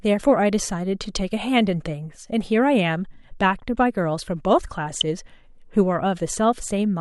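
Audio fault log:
4.87–5.02 s, DAB burbling: for about 0.15 s the speech breaks into burbling as bit errors slip past the error correction into the MP2 data, corrupting samples so single sub-bands carry short blips of noise. The sound points to a run of several damaged frames and a bit error rate of around 0.2 percent. A spectrogram shows blocky horizontal bands flaring and vanishing at frame boundaries, and the waveform shows brief irregular bursts of amplitude.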